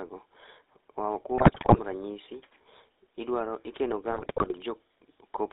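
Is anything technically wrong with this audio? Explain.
Yes, the speech has two problems.

GSM full-rate codec, throughout: the whole clip passes through a vocal-tract model driven by regular pulses, which fits the 13 kbps full-rate codec. Band-limited to roughly 250 Hz to 3.7 kHz, the voice is thin and carries a plainly audible buzzy, gravelly roughness.

GSM bit errors, from 1.38 to 1.80 s and from 4.10 to 4.54 s (just after "idwaro ikeno"): corrupted bits reach the decoder, distorting the filter, pitch and gain values frame by frame. The speech breaks into squawks, pops and gargling, consistent with a badly degraded radio link.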